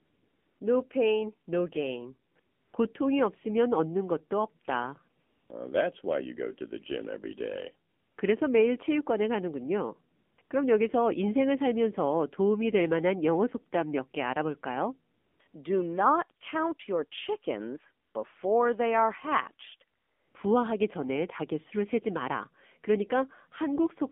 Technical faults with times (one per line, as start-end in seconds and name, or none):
0.00-24.12 AMR narrowband mobile codec
0.00-0.60 AMR comfort noise
2.32-2.74 AMR comfort noise
5.22-5.50 AMR comfort noise
7.90-8.18 AMR comfort noise
10.16-10.50 AMR comfort noise
15.14-15.54 AMR comfort noise
18.06-18.14 AMR comfort noise
19.98-20.34 AMR comfort noise